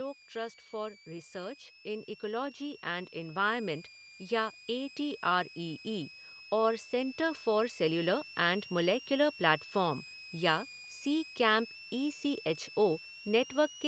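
A switching power supply is running in an audible burst mode or beating with another one, so a switching supply whistle sits under the speech for the whole clip. It is a thin, high tone wandering between 2.27 and 2.94 kHz, centred somewhere around 3 kHz, roughly 20 dB below the speech.

From 0.34 to 5.87 s the automatic gain control judges the input too quiet and keeps raising its gain, by about 8 dB in all. This automatic gain rising makes speech and background swell together over several seconds rather than jumping. A second, smaller rise of about 3 dB follows from 6.49 to 8.14 s, settling just before "एंड मॉलिक्यूलर प्लेटफ़ॉर्म".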